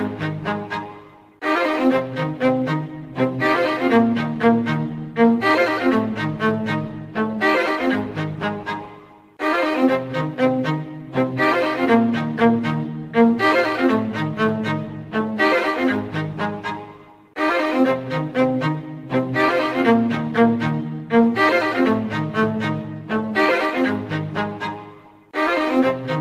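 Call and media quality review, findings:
No audible faults found in this recording. Nothing here warrants a ticket entry.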